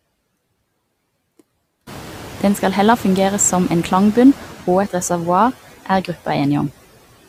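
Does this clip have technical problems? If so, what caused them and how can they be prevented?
Yes. Noise suppressor artifacts run through the whole speech clip: the suppressor cuts the steady background by about 16 dB frame by frame, so the residual noise dips between phrases and swells under them. Prevent it by using gentler suppression or reducing the noise at the microphone.

Noise suppressor catching up occurs from 1.86 to 4.31 s. The room noise jumps by about 21 dB around 2 s, and the suppressor's noise estimate lags, removing only about 5 dB at first before settling over 2.45 s, just before "og et reservoar". Prevent it with faster noise tracking in the suppressor.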